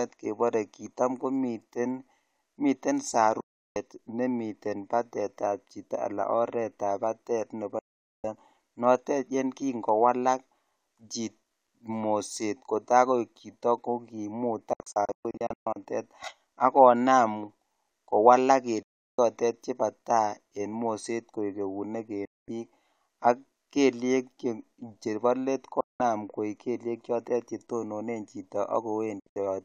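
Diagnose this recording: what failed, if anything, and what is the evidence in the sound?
The speech cuts abruptly to silence seven times: 3.40–3.76 s right after "kitam koniten", 7.79–8.24 s, 14.73–15.76 s (broken into several short holes), 18.83–19.19 s, 22.25–22.48 s, 25.80–26.00 s after "chbo let", and 29.20–29.43 s (also fragmented). Each mute enters within about 3 ms. This is a digital broadcast dropout at the reception stage. Corrupted frames failed checks and the receiver muted until clean ones returned, and gaps in multiples of 32 ms point to frames of that length.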